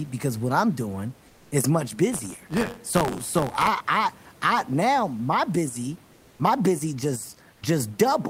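At 1.27 to 1.51 s, just after "because what I'm doing", the room noise gives way to a flat, featureless hiss about 2 dB quieter: comfort noise in place of the background, likely from discontinuous transmission filling a pause with synthetic noise. From 2.11 to 3.69 s, between "I'm doing is much" and "I I now my", a robotic 93.8 Hz buzz rides the sound. This is buffer tearing: a small slice of each buffer replays audio from roughly 30 ms earlier, which fits a 512-sample buffer. At 7.53 to 7.61 s, after "my busy my busy", the same smooth substitute noise returns, about 5 dB quieter.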